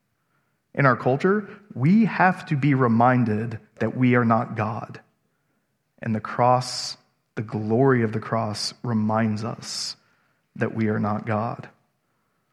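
Nothing goes wrong at any point in this bit of speech, so there's no technical fault to point out.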